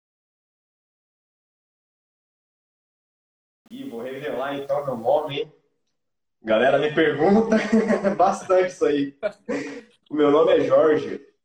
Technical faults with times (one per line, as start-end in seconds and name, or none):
0.00-5.31 truncation distortion on a fade